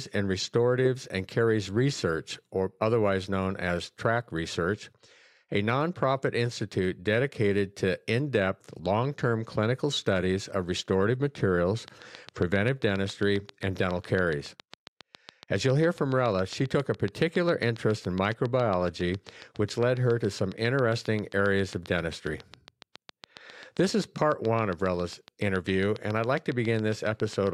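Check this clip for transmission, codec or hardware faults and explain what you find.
There is one fault, a train of clicks from 11.88 s to 27.48 s. About a hundred identical pops tick at a steady 7.3 per second, peaking a few dB above the speech and audible even in pauses. This is likely interference from nearby equipment. The matched shape and even spacing distinguish it from random crackle.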